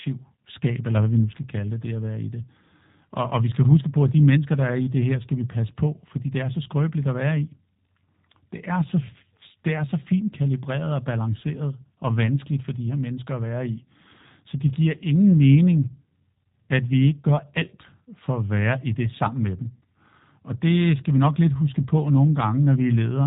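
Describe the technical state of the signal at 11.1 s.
At 11.1 s the speech carries G.729 codec damage, present across the whole clip. Speech is rebuilt from a vocal tract filter, pitch predictor and sparse pulses, which fits an 8 kbit/s codec. Nothing passes above 3.8 kHz. The sound is plainly rough and synthetic.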